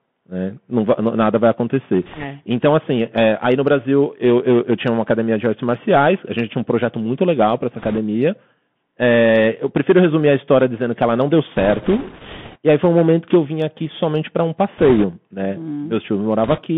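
Throughout, the speech has passed through a Bluetooth CVSD headset codec. The link carries one bit per sample, consistent with a 64 kbit/s stream, and its adaptive step lags sharp changes. Band-limited to roughly 150 Hz to 3.4 kHz, the speech sounds thin, with scratchy sibilants and a granular hiss underneath.

Bit errors on the Bluetooth voice link then flip a few percent of the bits, heaviest near the end, at 2.03–2.25 s, 7.79–7.99 s, 11.55–12.58 s, 14.77–15.04 s and 16.44–16.62 s. Each flipped bit nudges the signal only slightly, so there are no sharp clicks, just bursts of rushing, crackly noise over the speech.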